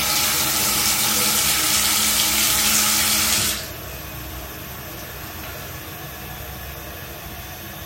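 Everyday sounds, with no technical faults to be heard.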